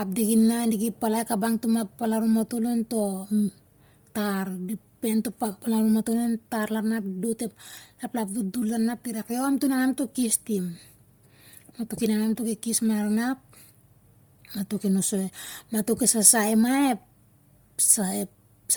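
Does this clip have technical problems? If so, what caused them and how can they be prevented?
Yes. Bluetooth LC3 compression affects the whole speech clip. The speech has a heavy breathy, grainy edge, with the top end sounding hissy rather than clear. This is likely LC3 encoding at a low bitrate, which fits about 32 kbps with 10 ms frames. The encoder discards much of the upper spectrum and fills it with noise. Content reaches about 20.2 kHz but sounds synthetic up there. To prevent this, record over a wired link or use a higher-bitrate codec setting.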